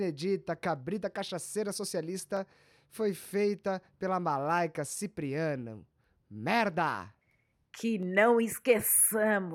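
Two sharp, isolated clicks at 2.37 s and 8.03 s are likely dropped samples, where a fraction of a millisecond goes missing and the waveform jumps abruptly.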